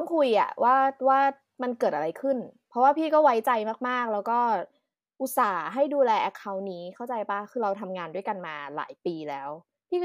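Nothing stood out as a technical fault on listening to this recording.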